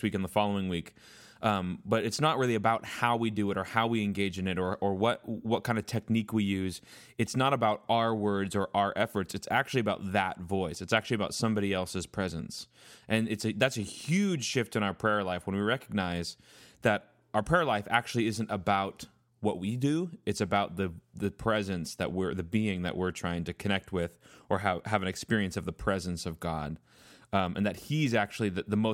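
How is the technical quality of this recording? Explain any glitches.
Nothing in the recording stands out as a technical problem, so there are no glitches to explain here.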